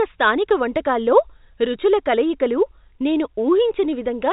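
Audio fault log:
No faults heard anywhere in this speech recording.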